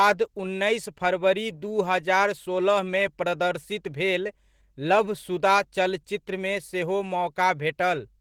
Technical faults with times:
0.00-8.21 Opus voice compression

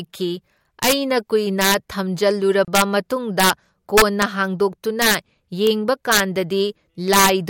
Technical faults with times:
0.00-7.50 integer overflow
2.65-2.68 gap at a join of encoded pieces

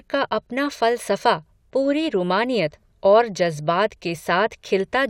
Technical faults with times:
none

